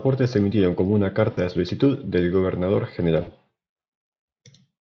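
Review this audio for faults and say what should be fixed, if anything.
VoIP packet loss concealed by the speech codec: lost packets at 1.31–1.39 s, after "se emitieron como una", and 3.21–3.31 s left the decoder extrapolating, a fading buzzy or noisy smear lasting about 60 ms each. Adding forward error correction and a deeper jitter buffer would prevent it.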